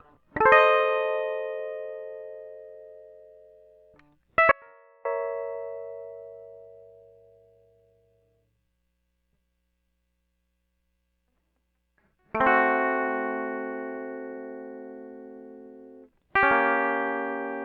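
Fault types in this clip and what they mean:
Audio dropout to a faint residue: the music cuts abruptly at 4.51 s and returns at 5.05 s, leaving about 0.54 s of faint sound roughly 35 dB down, likely a brief loss of signal on a still-live path. The waveform collapses to a thin sliver with sheer edges, and the spectrogram shows a dim band.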